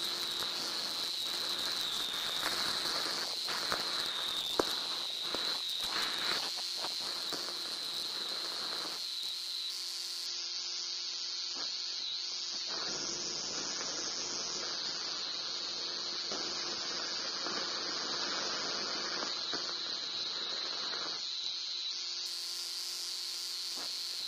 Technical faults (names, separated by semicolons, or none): adaptive stream at a lower bitrate